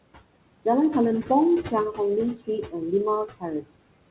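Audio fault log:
throughout: noise suppressor artifacts, the room noise pushed down by about 21 dB between phrases and rising again beneath them as gain shifts frame by frame.
3.61 to 3.71 s: speech cut by the noise suppressor, roughly a tenth of a second of speech treated as noise and dipped by up to about 17 dB, sounding swallowed.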